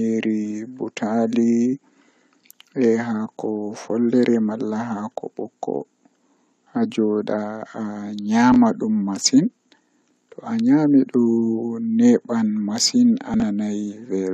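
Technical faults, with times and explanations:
8.52–8.56 s and 13.34–13.42 s, chunks out of order: a short slice of the speech plays after material that should follow it, about one 20 ms chunk late in the first spot and roughly three in the second. Nothing is missing, but the reordering and its hard joins produce a brief jumbled stutter.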